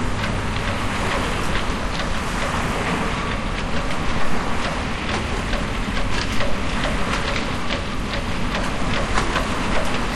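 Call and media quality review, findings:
Nothing stood out on listening to this recording of sounds.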